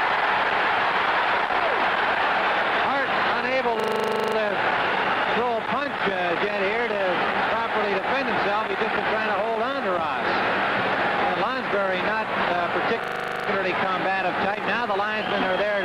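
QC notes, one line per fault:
3.80–4.36 s and 13.04–13.48 s, system hang loop: the host or driver stalled while the audio hardware kept replaying the same 40 ms stretch of its buffer, 14 times and then 11 times. Each pass repeats at 25 Hz, a rough, rapid buzzing stutter, with little or no audio lost afterwards.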